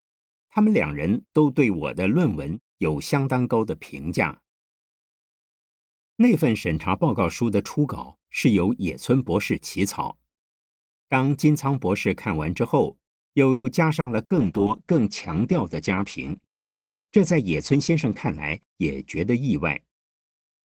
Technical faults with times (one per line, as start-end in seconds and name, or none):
13.51-13.67 call audio freeze
14.00-14.33 burst of packet loss
14.39-20.65 call bitrate drop
16.32-17.96 jitter buffer speed-up